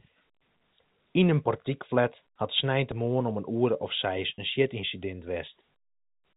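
Packet loss with pitch repetition occurs at 4.35 to 4.38 s. About 30 ms of speech goes missing, which fits a single lost packet. The receiver fills the gap by repeating the last pitch period, so the sound briefly holds with a slightly buzzy quality before the speech resumes.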